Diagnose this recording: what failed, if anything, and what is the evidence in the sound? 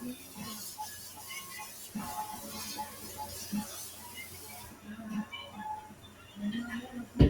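Throughout, onsets punch through while sustained parts and tails sink, with the loss swinging by around 10 dB. At the call-processing stage, a noise suppressor tuned for speech was left active on non-speech sound, treating steady content as noise.

Three passages sink further: 3.91 to 4.09 s drops by about 4 dB, 4.71 to 4.86 s by about 5 dB, and 5.93 to 6.36 s by about 6 dB. This is sound cut by the noise suppressor, which judged these stretches to be noise and attenuated them harder.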